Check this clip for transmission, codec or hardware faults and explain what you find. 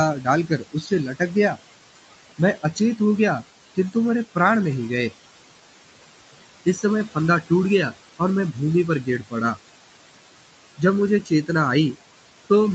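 The faults here are in the noise suppression, not in transmission or hardware. The Opus call path, with nothing above 8 kHz, and the room noise about 15 dB below the speech both sound as expected.

Noise suppressor artifacts run through the whole clip. The suppressor pulls steady background down by about 18 dB, frame by frame, so the noise sinks in pauses and swells back under speech. Codec coding noise would stay constant rather than pumping with the speech.

Speech cut by the noise suppressor occurs at 0.47–1.31 s (deepest drop about 16 dB, roughly a third of a second affected), 6.75–6.84 s (about 10 dB), 9.04–9.34 s (about 15 dB) and 11.23–11.49 s (about 13 dB). Quiet speech was mistaken for noise and turned down, so it sounds swallowed. Unlike packet loss, there are no clicks or hard gaps.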